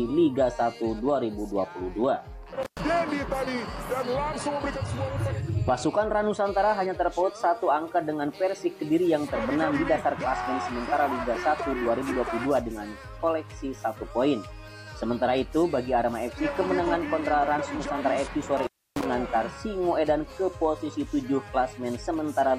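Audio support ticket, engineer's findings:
Intermittent contact, two events. 2.63–2.80 s: signal cuts out for about 106 ms, crackle at both edges, faint hiss while open. 18.57–19.06 s: same signature, longer open of about 296 ms. Probable component: loose cable or plug, momentarily losing connection. Distinguishing from a digital dropout: gaps aren't clean silence; scratchy transients mark break and reconnect, and line hiss persists through the gap.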